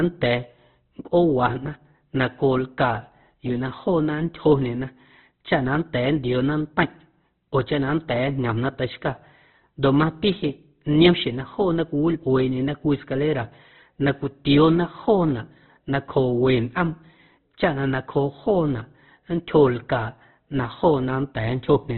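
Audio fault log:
Throughout, Opus compression: the speech sounds heavily degraded, with nothing above 4.3 kHz, so it comes across thin and band-limited, and the remaining tones are rough, grainy and noisy rather than swirly. The likely cause is Opus running in its music (CELT) mode at a very low rate, which fits a bitrate around 12 kbps. The encoder keeps each band's energy but, short of bits, fills bands with folded or noise content and narrows the bandwidth.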